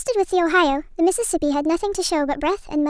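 Speech plays back high and hurried from start to finish, a wrong sample rate fault. It runs 1.38 times fast and sounds about 5.5 semitones high, which fits 16 kHz audio played at 22 kHz.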